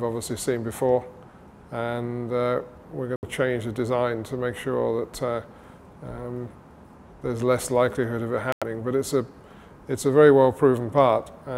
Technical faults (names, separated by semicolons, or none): Bluetooth dropout